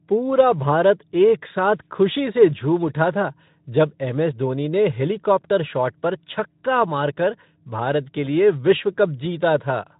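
The speech carries no technical faults, and the Speex coding it passes through behaves as that codec is designed to.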